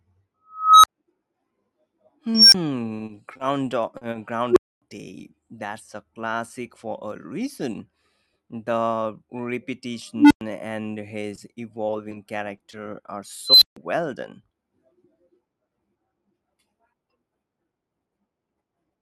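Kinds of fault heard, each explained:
Unstable filter: Five times a tone swells from nothing to a harsh, clipped squeal within 70 to 320 ms, then cuts to silence for 20 to 260 ms. Pitches range from a few hundred hertz to around 5 kHz. A recursive filter with bad coefficients runs away until its output overflows and resets.
Repeated packet loss (robotic sound): From 2.97 to 3.41 s the speech turns choppy. Holes of up to 40 ms follow in quick succession, each patched by stretching the previous sound, so about a quarter of that stretch is synthetic fill.
Short concealed packet loss: Brief smears or wobbles interrupt the speech at 3.97 s (40 ms), at 4.11 s, and in a cluster from 11.35 to 12.71 s (20 ms each). Late packets were replaced by continuing the last sound, then blended back into the real signal.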